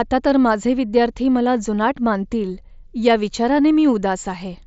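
There are no technical faults to describe at any point in this speech clip.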